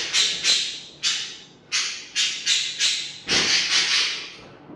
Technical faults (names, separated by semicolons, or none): none